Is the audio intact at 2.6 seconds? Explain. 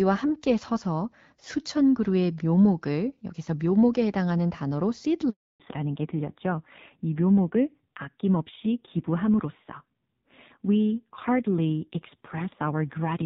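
Yes, the audio is intact at 2.6 seconds, with no fault heard at that moment.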